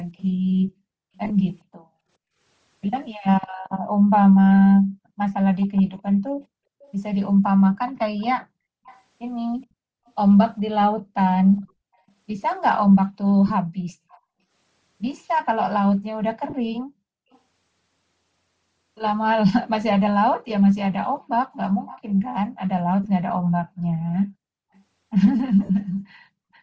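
Throughout the speech there is a grainy, breathy edge on the upper frequencies, plainly audible, with nothing above 8 kHz. This is likely Bluetooth LC3 compression, its upper spectrum thinned and noise-filled at a rate that points to roughly 32 kbps with 7.5 ms frames.

A faint echo leak begins at 0.17 s: a delayed copy of the speech arrives 418 ms late, roughly 30 dB down. The far end's echo canceller likely left residue from its loudspeaker, and that residue was sent back.

At 1.24 s lost LE Audio frames cause about 45 ms of missing audio spread over 60 ms. The decoder repeats the last spectrum with scrambled phase, so the affected parts turn into a brief noisy smear.

The same 418 ms echo returns at 5.6 to 6.93 s (about 25 dB down), 7.9 to 9.01 s, 10.06 to 11.61 s, 14.1 s, 17.32 s, 21.86 s (the strongest, about 20 dB down) and 23.45 to 24.14 s.

Further frame losses smear 13.48 s (22.5 ms), 16.5 s (30 ms), 23.04 s (15 ms) and 25.65 s (37.5 ms).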